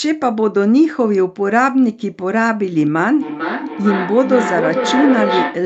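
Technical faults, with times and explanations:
3.20–5.65 s, feedback echo between two devices: the speech returns roughly every 0.4 s, thinner and ringing, peaking about 4 dB below the speech, as a second device's playback is re-captured.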